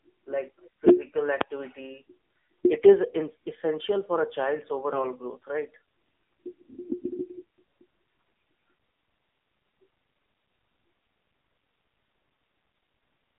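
Speech heard through the AMR narrowband mobile codec for its whole length. The audio is squeezed into a telephone band of roughly 250 Hz to 3.6 kHz. The low bit budget, which fits a mode around 7.4 kbps, gives the voice a plainly buzzy, synthetic edge. On a spectrogram, energy stops abruptly near 3.6 kHz with nothing above, thins out below 250 Hz, and the harmonics look smeared and blocky in 20 ms steps rather than cleanly striated. At 1.41 s there is a single loud bang from invalid numbers at full scale: a calculation produced infinite or invalid values that were clamped to one extreme value for about 5 ms, which fits a 256-sample processing block. The waveform shows a short flat rectangle sitting at one extreme, far beyond the speech peaks, and the spectrogram shows a thin vertical stripe running the full height of the band. Two bursts of AMR bit errors follow, at 3.08 to 3.16 s and 4.90 to 5.03 s. 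Corrupted bits in the less protected part of the frames, at a rate of a few percent, misplace the excitation pulses and upset the finer gain and spectral values. The pitch and loudness roughly hold, but the voice turns hoarse and gargly. On a spectrogram these stretches show ragged, broken harmonics and scattered noisy texture, while the waveform envelope stays at a similar level.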